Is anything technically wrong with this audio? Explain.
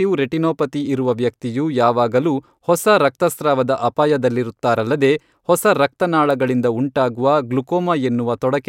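No, nothing in the signal chain points to a technical fault anywhere in the recording.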